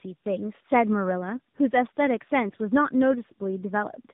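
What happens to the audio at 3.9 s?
At 3.9 s you're hearing tandem speech coding, which runs through the whole clip. The speech seems to have been decoded and re-encoded by about three speech codecs in a row, each working on the last one's damage, so it sounds rough, muffled and warbly, with nothing above 3.8 kHz.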